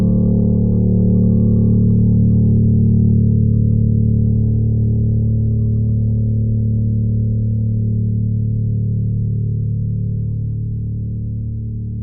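Nothing in this music clip needs a timestamp: there are no technical faults to point to anywhere in it.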